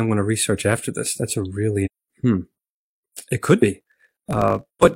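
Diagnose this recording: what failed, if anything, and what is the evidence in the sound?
Damaged data in a compressed stream, 1.81 to 1.88 s. This is a codec-stage failure. For about 70 ms the sound breaks into a brief disturbance, a chirp, squawk, click or short hole, rather than clean speech. Part of the encoded stream there was corrupted, so the decoder misread or rejected those frames, lost synchronisation and had to hunt for the next valid frame header before normal decoding resumed.

Block size mismatch (truncated), from 3.79 s to the end of the clip. The fault sits at the driver or buffer stage. A buzz at about 46 Hz appears, and the speech runs about 1.07 times too fast while keeping its timbre. That fits an upstream stage writing 1024-sample blocks into a reader that takes fewer samples per block. The tail of every block is discarded, producing the block-rate buzz and the speed-up.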